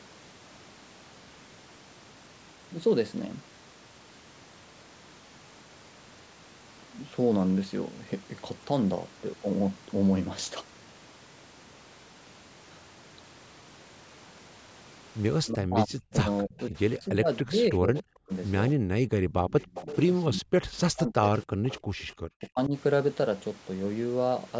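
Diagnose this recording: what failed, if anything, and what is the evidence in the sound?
Speech suppressed in double talk at 15.5–18.77 s, 20.29–21.85 s and 22.4–22.74 s: the speech dips by up to about 40 dB. This is likely the call's echo canceller turning down both talkers during overlap.

Echo leak at 16.58–16.63 s, 19.5–19.97 s and 21.43–22.46 s: a copy delayed about 290 ms, about 15–30 dB below the speech, likely loudspeaker pickup that the echo canceller missed.

Background gated by the echo canceller at 18.77–19.35 s: room sound drops about 40 dB while the canceller clamps the microphone, then returns.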